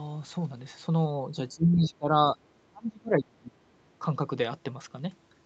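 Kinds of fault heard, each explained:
Speech suppressed in double talk: speech sinks by about 20 to 25 dB from 1.18 to 2.37 s and 2.58 to 3.56 s, likely an echo canceller ducking overlapping talk, unlike abrupt packet-loss gaps.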